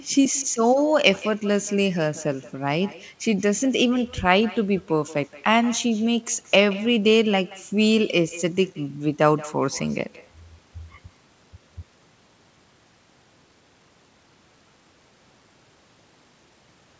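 Speech throughout carries an echo with no canceller: a far-end loudspeaker feeds the microphone, returning each phrase about 21 dB down, roughly a fifth of a second later, and thin.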